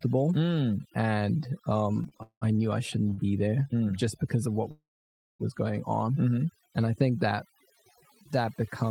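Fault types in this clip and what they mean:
Overdone noise removal: Throughout the clip, noise reduction set far too strong has pushed individual frequency bands down to nothing wherever they came close to its noise estimate, taking the quieter parts of the speech with them. The pauses sound like near silence with twinkling specks. On a spectrogram the background is a dark field dotted with isolated bright flecks, and the speech harmonics look patchy and broken.
Repeated stalls (stutter): Between 2.03 and 2.43 s, after "mm and" and before "knew I shouldn't be", packets kept arriving too slowly for playback. The jitter buffer emptied four times, and the receiver filled each gap by continuing the last sound. About 241 ms of that stretch, roughly 60 percent, is filled in this way, and the longest single gap is 189 ms. Nothing is lost, but the speech drags and stutters. The waveform shows repeated, smeared copies, and the spectrogram shows short horizontal bands with no change in them.
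Short stall from a late packet: Just after "knew I shouldn't" and before "be there mm just", two packets came in late one after the other, from 3.09 to 3.13 s and from 3.13 to 3.20 s. The receiver held the last sound for about 19 ms and then about 41 ms, so a fragment lingers before the speech carries on from where it stopped. On a spectrogram the last frame is drawn out into a brief flat smear, and the waveform shows a short repeated cycle.
Call audio freeze: From 4.71 to 5.42 s the audio stops and then picks up again from where it left off, with a gap of about 687 ms inserted and nothing missing. It starts as the last sound held briefly and quickly fading, and the last 580 ms are silent. The likely cause is packets held up in transit until the jitter buffer ran dry. The waveform shows a brief repeating tail that tapers into a flat line, and the spectrogram shows a stretched frame followed by a blank column.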